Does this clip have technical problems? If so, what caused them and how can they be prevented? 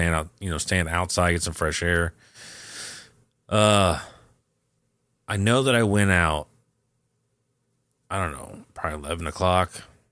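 No, nothing in this speech recording points to a technical fault, so there is no cause to trace and nothing to prevent.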